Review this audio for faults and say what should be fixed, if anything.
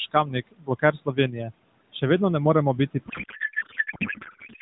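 A codec payload misread starts at 3.08 s, right after "moremo biti", and runs to the end of the clip at 4.61 s. The receiving side is unpacking the AMR-NB frames in a different bit layout than the sender used. The garbling fits octet-aligned frames being read as bandwidth-efficient ones. Every field lands in the wrong place, so the decoder synthesises garbled noise and warble that barely tracks the speech, in place of the speech. The light, narrowband AMR coloration before this point is the codec working as intended. To prevent it, make both ends negotiate and enforce the same AMR payload format (the octet-align parameter in SDP) before media flows.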